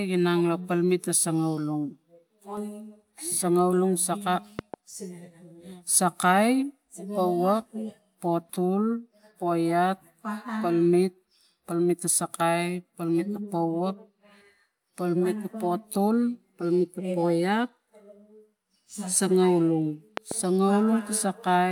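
At 4.59–4.76 s and again at 20.17–20.34 s, a loud pop lands as a quick double thump, well above the speech, which continues underneath. The likely cause is an electrical voltage spike, not a dropout.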